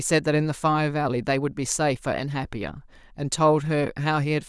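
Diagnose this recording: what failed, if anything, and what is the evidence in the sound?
Listening through the speech, nothing stood out that would point to a failure at any stage of the chain.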